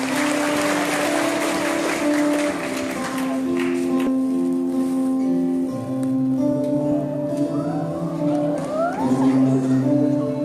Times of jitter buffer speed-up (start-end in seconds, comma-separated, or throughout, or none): 5.90-7.23, 8.26-9.45